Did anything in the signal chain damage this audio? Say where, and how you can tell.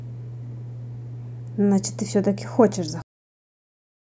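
Yes. A cut-off end at the storage stage: the speech stops abruptly at 3.02 s into digital silence without decay, because the final buffers were never written.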